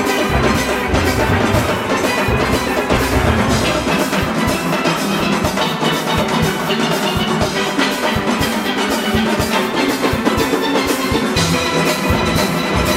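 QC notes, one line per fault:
2.97 s and 5.20 s: dropped buffer (overrun). Each is a small forward jump in the sound. Likely about 20 ms went uncollected, and the sides joined directly.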